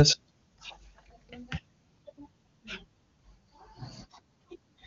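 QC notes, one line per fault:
No faults heard.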